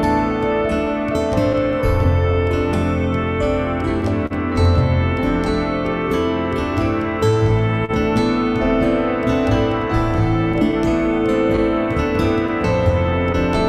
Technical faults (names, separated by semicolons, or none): clock drift between sender and receiver; scattered short gaps; short stall from a late packet